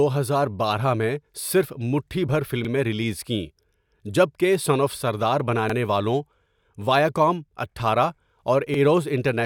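Overlapping chunks at 2.65 s (before "ریلیز کیں"), 5.70 s (after "کہ سن آف سردار") and 8.74 s. Each 3 s chunk starts 48 ms early, so that stretch replays as a brief stutter. It shows as a repeated waveform segment and a vertical seam in the spectrogram.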